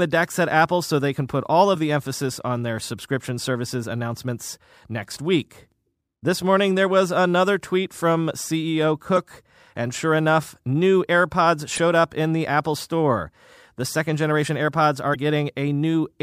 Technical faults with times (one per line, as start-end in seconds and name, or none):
1.71-1.76 damaged data in a compressed stream
9.13-9.17 damaged data in a compressed stream
11.74-11.79 damaged data in a compressed stream
15.11-15.16 damaged data in a compressed stream